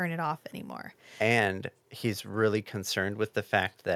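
No technical faults are audible.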